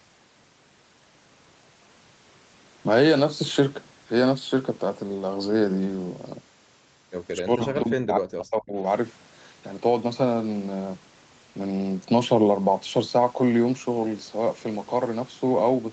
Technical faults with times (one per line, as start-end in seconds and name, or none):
7.42-8.77 speech suppressed in double talk